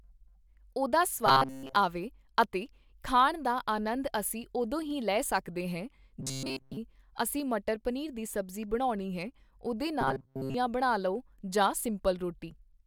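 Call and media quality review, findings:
Robotic sound from repeated short buffers, 1.26–1.76 s (before "ਆਵੇ ਅਤੇ ਖਾਣ ਦਾ"), 6.20–6.78 s and 10.01–10.54 s: speech collapses into a metallic 133 Hz buzz. Likely jitter-buffer underrun looping a roughly 7.5 ms block, replacing most of the real audio.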